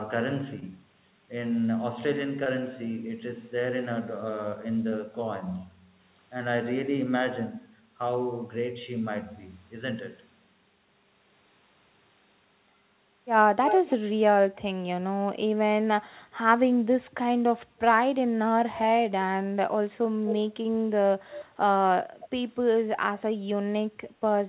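Speech over a narrowband call path, with nothing above 4 kHz, consistent with G.711, has short concealed packet loss at 0.60, 2.44 and 4.90 s, where about 20 ms of audio was missing each time and the gap was filled by extrapolation, leaving brief smears. A delayed repeat of the speech, roughly 240 ms behind, appears at 13.67 to 13.93 s, 20.29 to 20.35 s and 22.21 to 22.28 s. It is strongest in the first instance and much weaker by the last, likely echo leak from a loudspeaker the echo canceller didn't fully cancel.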